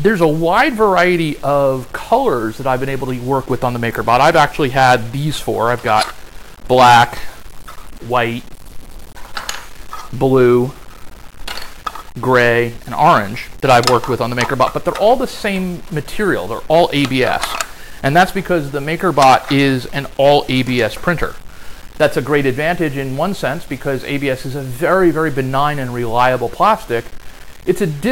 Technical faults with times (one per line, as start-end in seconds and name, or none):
0.00-28.12 low bit depth without dither